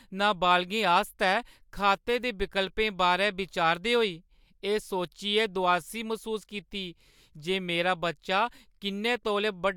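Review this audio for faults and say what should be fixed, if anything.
No faults are audible in the audio, so nothing needs to be fixed.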